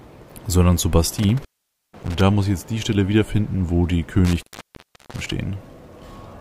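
Intermittent contact at 1.18–2.21 s and again at 4.25–5.32 s, where a loose connection opens for about 0.49 s and then 0.72 s. Crackle at each break and faint hiss underneath set it apart from a clean digital dropout.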